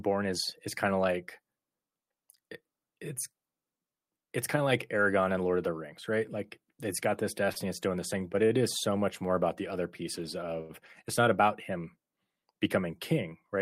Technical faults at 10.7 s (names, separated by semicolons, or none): short stall from a late packet